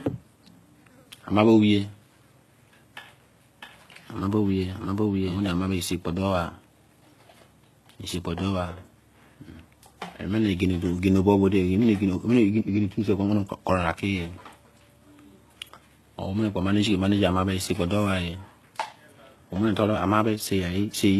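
Transcoding between lossy codecs runs through the whole speech clip: nothing is present above 12.3 kHz, and the artefacts of two codecs are heard together. The smeared, watery texture of a very low-rate spectral-band-replication coder sits beneath the cleaner framing of a higher-rate final stage. This likely comes from an HE-AAC encode at around 16 kbit/s that was then re-encoded to WMA at about 96 kbit/s. The second encoder spent its bits preserving the first one's damage, so the sound never recovers.

A doubled audio track appears from 3.62 to 5.38 s, ending just before "omie sei kpo". A second full-band copy of the speech trails the original by roughly 0.7 s at about the same loudness. It has no reverberant tail or room colouring and starts and stops abruptly. The likely cause is the same signal being captured again through a slower path, or an edit leaving two unaligned copies layered together.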